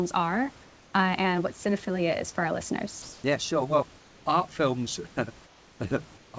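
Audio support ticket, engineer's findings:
Comfort noise in place of the background at 0.64–0.94 s, 3.02–3.24 s, 3.98–4.26 s, 5.46–5.80 s and 6.18–6.34 s, in pauses between speech. Real room noise (about 28 dB under the speech) is swapped for a steady, featureless hiss, level shifted by about −3, +1, −2, −4 and −3 dB. Spectrogram: textured background turns to smooth, uniform noise, still nothing above 8 kHz. Likely discontinuous transmission, receiver-side noise synthesis.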